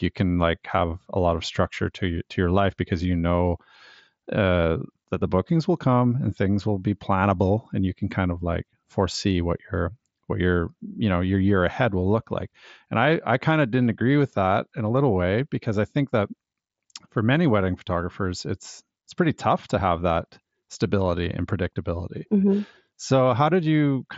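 Nothing stood out on listening.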